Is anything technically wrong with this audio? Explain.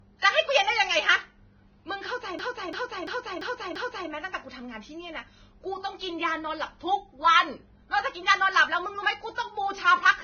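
Yes, three faults are audible.

Vorbis compression, throughout: the speech sounds hissy and grainy, with nothing above 6.5 kHz. The likely cause is heavy lossy encoding at a rate of roughly 17 kbps, where the treble is quantised so coarsely that fine detail turns to noise and consonant attacks blur.

System hang loop, 2.39 to 4.10 s: a 341 ms slice of audio repeats exactly five times, a stutter at about 2.9 Hz. The machine froze while the sound hardware kept replaying the same ring buffer, whose length fits a 16384-sample buffer.

Pre-echo, 9.35 to 9.38 s: a hiss runs about 29 ms ahead of a sharp onset, softening it. The transform codec spread quantisation noise, sized for the loud attack, across its whole block, so the noise leaks into the quiet moment just before the attack.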